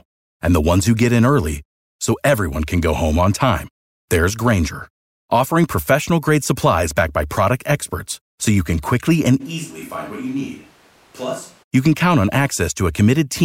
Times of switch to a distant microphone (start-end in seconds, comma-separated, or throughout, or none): 9.42-11.61